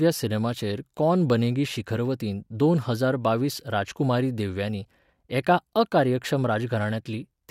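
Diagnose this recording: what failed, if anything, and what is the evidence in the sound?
Nothing failed here, and the sound of the speech gives no evidence of a fault at any stage.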